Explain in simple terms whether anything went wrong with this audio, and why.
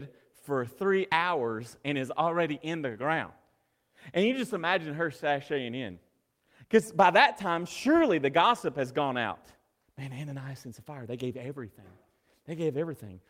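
Nothing went wrong here; the speech comes through steadily the whole way, with no glitches, dropouts or odd noises to point to.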